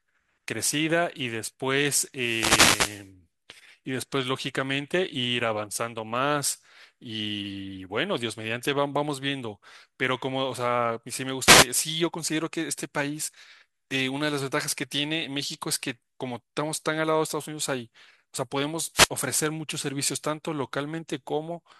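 The analogue radio link of the wireless mic faded as reflections cancelled, so receiver noise surged: wireless microphone noise hits swish over the speech at 2.14–3.10, 11.40–11.68 and 18.94–19.09 s.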